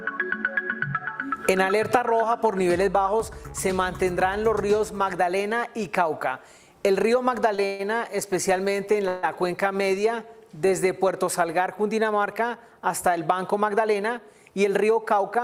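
At 7.55 s a late packet left the jitter buffer empty, causing a short stall from a late packet: the last sound is held about 26 ms too long before resuming.

At 7.66 to 7.81 s and again at 9.08 to 9.25 s, packets were likely held up in transit, giving a call audio freeze. The receiver stretched the last sound into a fading buzz or hiss for 132 ms and 148 ms, then resumed where it stopped.

From 13.42 to 15.38 s, a jitter buffer speed-up trims roughly 150 ms of excess buffered audio by repeatedly cutting tiny pieces, so the sound runs at 107% speed, audibly hurried, with unchanged pitch.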